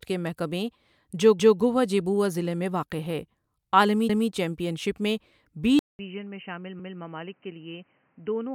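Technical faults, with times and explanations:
1.39 s, 4.09 s and 6.79 s, overlapping chunks: at each of these points a 200 ms stretch of speech plays twice, heard as a short stutter with a click at the seam. The first comes right after "کے محکمے جو" and before "گؤہ جیبؤا ضلع". The second comes after "واقع ہے عالمی" and before "چیمپئن شپ میں بی". The third falls in the later, duller section. The audio was cut into chunks of about 2.5 s, and each chunk began 200 ms before the previous one ended, so every join replays that overlap.
5.79 s to the end, input switched to a poorer device: right after "چیمپئن شپ میں بی" there is a 200 ms gap. The speech then returns roughly 10 dB quieter and boxy, with nothing above 3.1 kHz and a new background noise sitting around 35 dB below the speech. The narrow band, the changed tone and level, and the fresh noise floor point to the recording likely having moved mid-take to a lower-quality microphone or a headset's call-mode input.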